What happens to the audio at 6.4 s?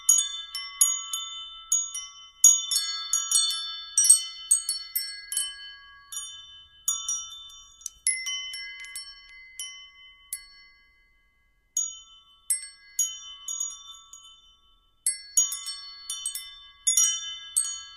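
At 6.4 s the audio plays through intact, with no dropout, click, distortion or other fault.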